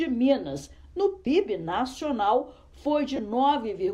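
Lost LE Audio frames at 1.25 s and 3.16–3.19 s: the LC3 decoder refilled the 15 and 22.5 ms gaps with sign-randomised spectral repeats, briefly smearing the sound into noise.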